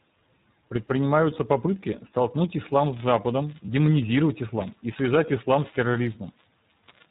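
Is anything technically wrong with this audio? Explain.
Yes, two related faults are audible in this speech clip.

iLBC codec, throughout: The whole clip carries the band-limited, slightly rough and synthetic character of iLBC narrowband coding. The codec models each short frame's excitation on its own, and the damage is plainly audible, consistent with the 15.2 kbps, 20 ms frame mode. Nothing above 4 kHz survives, so the speech sounds muffled and lacks sibilant crispness.

Lost iLBC frames, at 3.66–3.69 s and 5.26–5.29 s: Each dropout fits the loss of a single 20 ms frame. The decoder filled the gap by repeating the last pitch cycle blended with noise. Each one is heard as a very brief held, slightly buzzy or breathy vowel-like smear. Because iLBC frames decode independently, the speech recovers cleanly immediately afterward.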